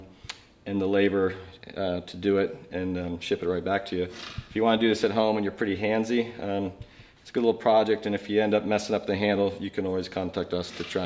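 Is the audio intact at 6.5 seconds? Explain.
Yes, the audio is intact at 6.5 seconds, with no dropout, click, distortion or other fault at that point.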